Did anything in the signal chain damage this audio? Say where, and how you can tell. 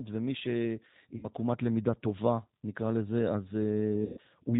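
Yes. Throughout, the audio is dull, with nothing above 4 kHz, and plainly rough and synthetic in texture. That points to the codec stage: the G.729 codec at 8 kbit/s, which rebuilds the sound from a filter model, a pitch predictor and a few pulses per frame.

At 1.17–1.26 s and 4.05–4.20 s the sound smears into a fading buzzy tone or coloured noise and stays weak briefly afterwards. This is VoIP packet loss concealed by the speech codec, a network fault. About 60 ms and 120 ms are missing, which fits two and four lost 30 ms packets. The decoder extrapolated its last pitch and filter with falling gain.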